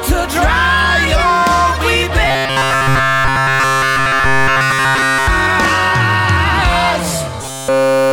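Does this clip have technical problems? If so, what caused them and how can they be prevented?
Yes. Robotic sound from repeated short buffers appears from 2.27 to 5.28 s and again from 7.42 to 8.12 s. Essentially all the sound is replaced by a rigid, metallic 134 Hz buzz, likely from one roughly 7.5 ms buffer being replayed while new audio arrived too slowly. A spectrogram shows evenly spaced harmonics of 134 Hz, and the waveform shows one short shape copied over and over. Larger playback buffers and steadier audio delivery would prevent it.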